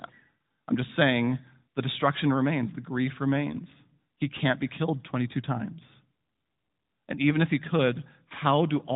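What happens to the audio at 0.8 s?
Nothing goes wrong at 0.8 s: the speech there carries only the steady narrowband character of its AMR-NB mobile codec path, which is working as expected, with no dropout, click or other break.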